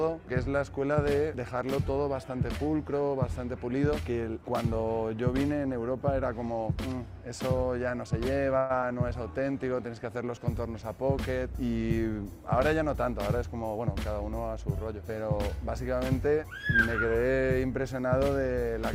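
At 8.57 to 8.72 s there is a call audio freeze: the last sound is stretched into a fading buzz for 121 ms, likely because packets were held up and the jitter buffer ran dry. Nothing is lost, but playback resumes 121 ms later than before.

Shortly after, at 8.82 to 8.84 s, a skip ahead jumps forward. Roughly 70 ms of audio is dropped and the two sides are joined with only an 8 ms bridge, which claws back about 50 ms of the delay just added.

From 9.31 to 9.59 s a jitter buffer slow-down rebuilds the reserve by repeating single pitch periods, adding 46 ms. The audio plays at 87% speed with pitch unchanged, so sounds in that stretch come out drawn-out.

Two jitter buffer speed-ups trim excess buffered audio by cutting short pitch-period pieces. From 12.67 to 13.87 s the rate is 105%, removing about 70 ms, a mild hurry. From 16.27 to 16.51 s it rises to 113%, removing about 40 ms, which is more audibly rushed.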